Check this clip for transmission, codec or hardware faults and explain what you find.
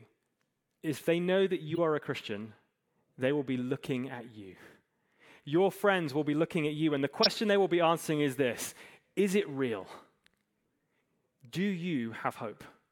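Two brief codec faults interrupt the speech. Corrupt frame decoded, at 1.70–1.78 s and 7.23–7.29 s: a few compressed frames arrived with flipped bits and the decoder played them anyway. Misread gains and codes put energy at the wrong frequencies, giving short chirpy bursts of noise. The second burst is much louder than the first.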